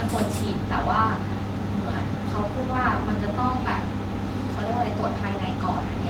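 A recording of speech, with no technical fault audible anywhere in the signal.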